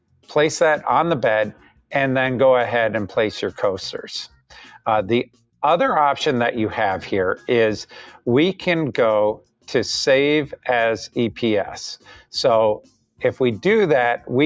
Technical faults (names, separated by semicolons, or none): noise suppressor applied to music or sounds; sound cut by the noise suppressor